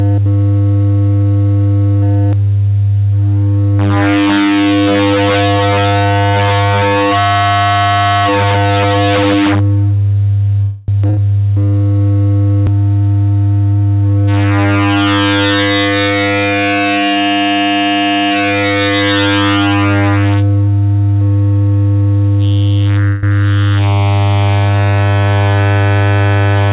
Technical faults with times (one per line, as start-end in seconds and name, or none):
10.62-10.90 call audio freeze
11.10-11.20 burst of packet loss
13.73-14.79 jitter buffer speed-up
23.08-23.25 call audio freeze
26.38-26.69 jitter buffer speed-up